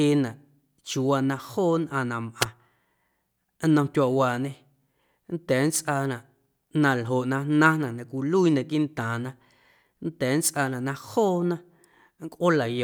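A wireless microphone squelch dropout occurs at 2.40 to 2.46 s. The analogue FM radio link weakens, so a short burst of hiss rises before the receiver's squelch cuts the output for about 4 ms. The speech then returns.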